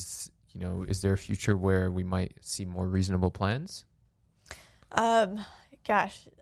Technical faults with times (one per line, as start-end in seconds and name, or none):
none